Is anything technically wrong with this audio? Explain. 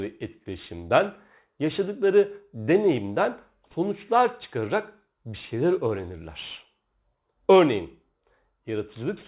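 Yes, aliasing runs throughout: the speech was downsampled without an anti-alias filter, likely to 8 kHz. Energy above 4 kHz folds back at about -25 dB, leaving sibilants gritty and metallic.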